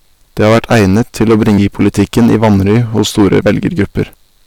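Speech, and it's heavily overdriven the whole way through: hard clipping at about 15 dB of overdrive, so something like 7 percent of the samples are getting their peaks sheared flat. That's more than an occasional crackle on the loudest syllables. The flattened tops throw harmonics well up the spectrum, so nearly every stressed moment carries a harsh, fuzzy edge. On top of that there's a regular tick, roughly every 1.02 s from about 0.25 s to 4.0 s, around five of them, only while there's signal. That steady spacing is the signature of clock drift buffer slips. The likely culprit is two devices running on their own clocks a few hundred ppm apart, with the buffer between them overflowing or running dry until a small block, on the order of 15 samples, gets dropped or repeated, which you hear as that click. Separately, at 1.58 s and again at 4.14 s there's a brief glitch, which points to damaged data in a compressed stream. 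The decoder hits frames it can't read properly, loses sync and skips ahead to the next frame header it can find.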